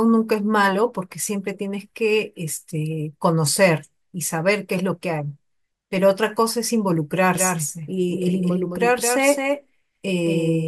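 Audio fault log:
7.35 s to end, doubled audio track: from 7.35 s a second copy of the speech follows about a fifth of a second behind, a few dB quieter, and begins abruptly with no reverb tail. This is likely the same signal reaching the mix twice through a slower path.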